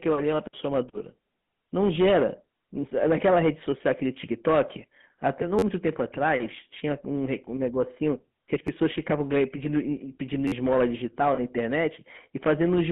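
A speech clip carried throughout by the GSM full-rate codec, with plainly audible damage: a buzzy, gravelly roughness from the pulse-driven vocal-tract model. The line band runs from about 150 Hz to 3.5 kHz, which fits the 13 kbps full-rate coder. Repeated buffers occur at 5.59–5.62 s, at 8.67 s and at 10.48–10.52 s. In each, a piece about 10.7 ms long replays with hard joins when new audio arrives late, which fits a 512-sample buffer. The result is a brief buzzy stutter, the longest at 10.5 s, and roughly 30, 10 and 40 ms of audio are lost. From 11.34 to 11.39 s, lost GSM frames leave a short rough, metallic ring as the last good frame's parameters repeat to cover the 40 ms gap.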